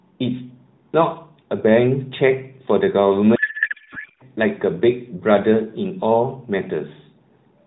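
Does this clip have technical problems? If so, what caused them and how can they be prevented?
Yes. From 3.36 to 4.23 s a codec payload misread replaces the narrowband speech with garbled warble that barely tracks it. Unlike packet loss, the sound stays continuous rather than dropping out or repeating. This likely comes from octet-aligned AMR frames being parsed as bandwidth-efficient. Prevention: make both ends negotiate and honour the same AMR payload format (the octet-align parameter) in signalling.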